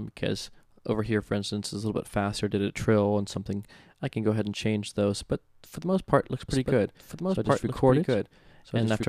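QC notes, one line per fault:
6.49 s to the end, doubled audio track: a second full-band copy cuts in abruptly about one and a half seconds behind, at roughly equal level, with no decay or room colour to suggest an echo. It likely comes from a slower second capture path.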